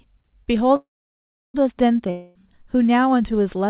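At 0.76 s the speech stops for 0.78 s, until 1.56 s. This is a call audio freeze. The last sound carries on briefly as a fading buzz, then about 0.68 s of silence. The likely cause is delayed packets draining the jitter buffer. Speech resumes where it stopped, with nothing lost.

From 2.11 s to 2.37 s there is a long network dropout. A buzzy fill covers about 0.24 s, with no true silence. When speech returns, that stretch is gone. Lost packets are the likely cause. Through G.711 nothing above 4 kHz passes.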